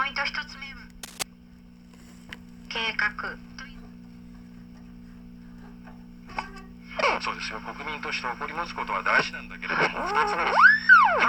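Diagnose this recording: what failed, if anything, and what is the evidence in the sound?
Cable scratch noise appears from 1.03 to 1.23 s as a dense, uneven burst of scratchy rustle roughly 10 dB below the sound. It points to the analogue wiring stage, likely a worn connector or cable whose contact resistance jumped around while moved. Unlike a single digital click, it is an irregular cluster.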